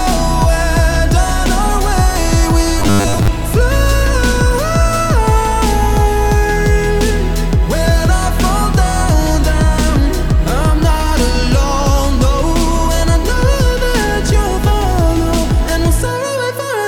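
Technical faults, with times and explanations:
2.80 to 3.28 s, robotic sound from repeated short buffers: audio likely arrived too seldom, so a stretch of about 10 ms kept repeating in place of most of the real audio, forcing a rigid, metallic 100 Hz buzz onto the sound.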